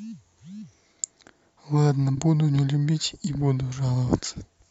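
A speech clip where, from 2.14 to 2.20 s, a brief garbled flutter breaks the sound. This is frames out of order: two adjacent blocks of about 23.2 ms each were decoded swapped, so that stretch plays with its halves exchanged and no time is lost.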